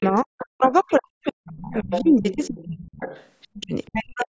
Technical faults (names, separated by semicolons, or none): speech suppressed in double talk; other side's voice leaking through